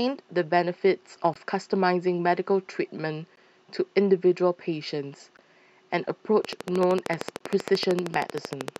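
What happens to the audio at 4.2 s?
Nothing goes wrong at 4.2 s: the speech runs on intact through that moment, with no dropout, click, distortion or other fault to be heard.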